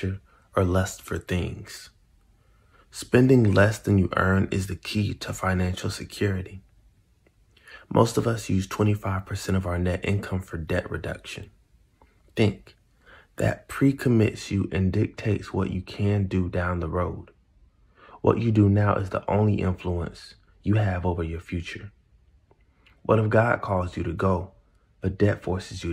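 From 14.34 s to the end, de-emphasis is applied wrongly. A treble cut meant to reverse pre-emphasis hits audio that never had it, or is applied a second time. The response slopes smoothly downward, about 10 dB lower at 10 kHz than at 1 kHz. The sound turns dull and muffled.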